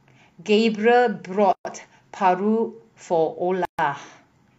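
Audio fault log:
1.53–1.65 s and 3.65–3.79 s, gap at a join of encoded pieces: silences of 122 ms and 136 ms, two seconds apart, left by untrimmed encoder delay and final-frame padding where separately encoded speech pieces were joined.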